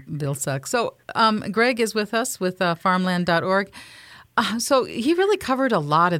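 No technical faults turn up anywhere in the speech, so there is nothing to place in time order.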